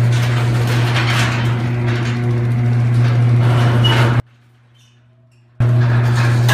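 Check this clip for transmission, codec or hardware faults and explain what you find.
One transmission fault is audible. At 4.20 s the sound cuts abruptly to a faint leak about 35 dB down, returning at 5.60 s. This audio dropout to a faint residue is likely a broken feed into a still-live path.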